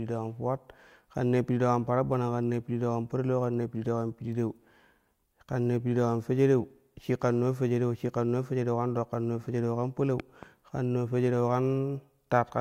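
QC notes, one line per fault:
10.20–10.45 s, loud pop: two sharp pops in quick succession, peaking around 10 dB above the speech, just before "kan naa". The speech carries on underneath. A sudden electrical step or pulse was likely added to the signal, perhaps from a connector, a switch, static or a driver glitch. Each jolt passes through the downstream circuitry, which shapes it into a brief transient, so it reads as a pop laid over the speech.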